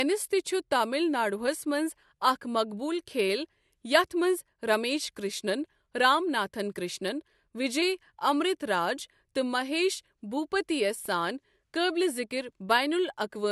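CD scratch ticks appear between 10.80 and 11.31 s: three brief clicks, each well under a millisecond, spaced about a quarter-second apart, so roughly four per second. A blemish on the disc surface corrupts more data than the error correction can restore, and it passes under the laser once per rotation. Each time, the player patches or silences the damaged samples, and that momentary gap in the speech comes through as a small, regular tick.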